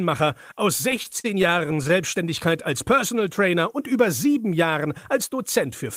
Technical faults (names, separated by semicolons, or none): repeated stalls (stutter)